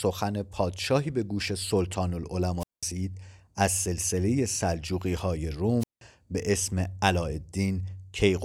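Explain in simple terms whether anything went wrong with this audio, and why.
Wireless microphone squelch dropouts at 2.59 s and 5.80 s: the radio signal weakened, so the receiver muted the speech for about 0.2 s each time.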